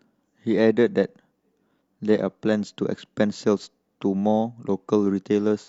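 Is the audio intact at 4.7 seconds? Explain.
Yes, the speech at 4.7 seconds plays through intact, with no audible fault at that moment.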